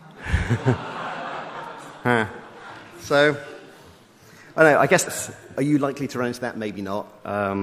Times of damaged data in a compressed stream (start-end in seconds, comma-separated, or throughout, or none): 5.02-5.08